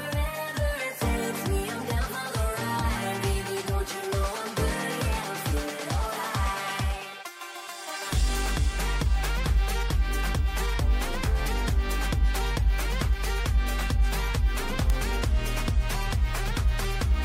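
A bit error spike at 14.90 s shows up as a single sharp tick. The sample values jump abruptly to a peak of about -11 dBFS and return at once. The width of the tick fits two adjacent samples being corrupted. This happens when one bit flips in memory or on a digital link and throws the stored value off by a power of two. Because the error is so brief, its energy spreads across the whole spectrum, and the tick has no relation to the surrounding audio.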